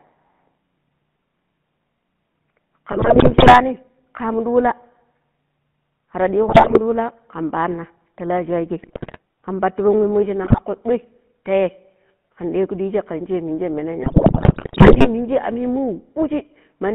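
The whole clip carries GSM full-rate codec damage. The speech sits in a narrow band, roughly 150 Hz to 3.4 kHz. The codec models the vocal tract and drives it with regularly spaced pulses. That leaves a plainly buzzy, gravelly roughness, which fits the 13 kbps full-rate codec.

GSM bit errors break through five times: 2.92–3.62 s, 6.48–6.79 s, 8.82–9.18 s, 10.44–10.60 s and 14.02–15.08 s. Corrupted filter, pitch and gain values warp the spectrum and level frame by frame. The speech squawks, pops and gargles. The last burst runs longest.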